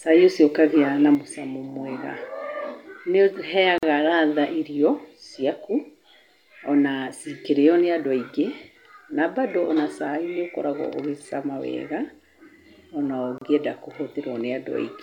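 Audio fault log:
1.15 s to the end, one channel drops out: Right after "ũkagĩa na", the level falls abruptly by about 6 dB and stays down for the rest of the clip. The drop is a clean step, not a fade. Anything carried in only one side is gone. The likely cause is the loss of one stereo channel before the mono sum, so only half of the shared signal remains. That halving gives the 6 dB fall.
3.78 to 3.83 s and 13.38 to 13.41 s, gap at a join of encoded pieces: Short silences cut into the continuous speech, 45 ms long at the first point and 33 ms long at the second. Both have edges smeared by the codec. The sound resumes exactly where it stopped. Separately encoded pieces were joined without trimming. Each encoder's start-up delay and final-frame padding stayed in as silence at the seams.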